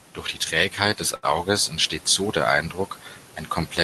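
Speech, and at 1.15 s one sound hangs on too long, stretched for about 76 ms until 1.25 s with a faint buzzy, slightly sunken quality before the voice carries on from exactly where it left off, nothing dropped. That is a short stall from a late packet: the jitter buffer ran dry waiting for audio, the receiver padded the gap by extending the last sound, and the whole stream ended up about 76 ms later from that point. The call codec's coding noise and a top end stopping near 12 kHz are audible throughout.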